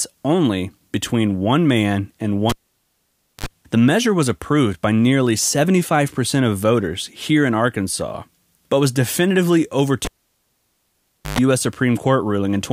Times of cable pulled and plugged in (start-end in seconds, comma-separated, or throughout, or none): 2.50-3.46, 10.05-11.39